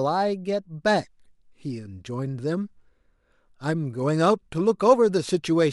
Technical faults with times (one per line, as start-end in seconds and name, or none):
none